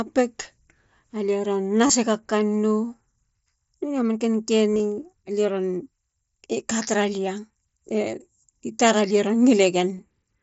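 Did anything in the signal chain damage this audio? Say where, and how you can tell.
Yes. The Bluetooth radio link between headset and phone dropped packets, and the receiver concealed each gap by repeating the best-matching slice of recent waveform: concealed Bluetooth headset packet loss. About 22 ms is lost at 1.87 to 1.90 s. Before "alie ron", 4.74 to 4.80 s loses about 60 ms in bursts over 90 ms (longest 22.5 ms), giving a brief buzzy hold and a warble as real audio returns. After "i tar alie ron", a 15 ms loss falls at 9.98 s.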